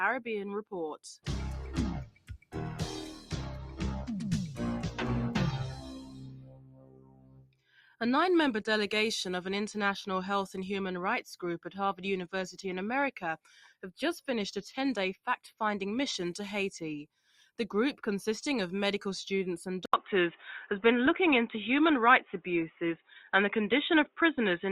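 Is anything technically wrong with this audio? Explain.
Yes, there are a few. A noise suppressor built for speech was left on this non-speech sound for the whole clip. It mistakes steady tone and tails for noise, so levels pump by around 10 dB.

Sound cut by the noise suppressor shows up at 2.05 to 2.55 s (about 18 dB down), 3.14 to 3.33 s (about 10 dB), 5.72 to 7.76 s (about 18 dB), 17.06 to 17.59 s (about 14 dB) and 22.97 to 23.3 s (about 16 dB). Held parts sink while attacks survive.

At 19.86 s there's an 80 ms gap, then the band is narrower through to the end. The level shifts by a few dB, and new hiss sits roughly 30 dB under the signal. That's likely the input switched to a poorer device.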